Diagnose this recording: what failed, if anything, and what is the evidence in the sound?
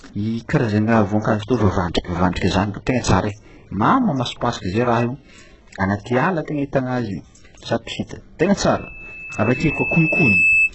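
HE-AAC compression, throughout, at the codec stage: the speech is heavily damaged and nothing sits above 8 kHz, most likely from very-low-bitrate HE-AAC, around 8 kbps, with replicated treble.

Pre-echo, 2.32 to 2.36 s, at the codec stage: a 39 ms hiss precedes an attack, because the quantisation noise is spread across the whole transform block.

Loudspeaker feedback squeal, 8.79 to 10.72 s, in the acoustic loop: a 2.6 kHz tone builds over about a second and a half to about 5 dB above the speech as the loop gain exceeds one.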